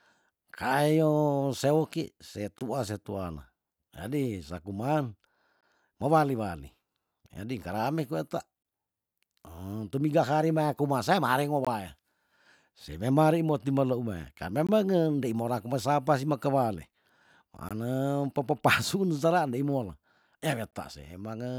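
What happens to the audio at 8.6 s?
A gap between chunks: the audio was delivered in separate pieces, apparently 3 seconds long, and the join at 8.63 to 8.65 s left a 20 ms stretch of silence. The speech stops abruptly there, a brief hard-edged hole with nothing lost on either side.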